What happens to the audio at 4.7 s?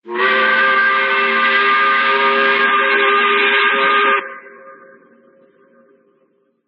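At 4.7 s the adaptive stream has switched to a lower bitrate, from 2.64 s to the end. The slowed connection forced a sudden, gapless shift to a much leaner encode, which fits a drop from about 128 kbit/s MP3 to roughly 15 kbit/s. Everything above 4.2 kHz is gone, so the sound turns dull and smeared with codec artefacts.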